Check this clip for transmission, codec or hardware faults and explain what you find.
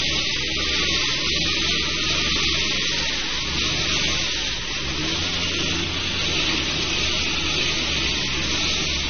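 Two faults are present: a codec problem across the whole clip and a short overload near the end.

Throughout, the sound shows AAC compression damage, likely from AAC-LC encoding at a low rate, consistent with about 24 kbps. To save bits, the encoder dropped everything above 6.3 kHz and coarsely quantised what remained. The audio is dull and smeared, with a plainly audible warbling, fizzy texture.

From 6.25 to 6.50 s there is hard clipping. A stage was driven about 1 dB past its limit, so waveform peaks were sliced flat. Those flat tops add high harmonics, heard here as crackle on the loudest moments.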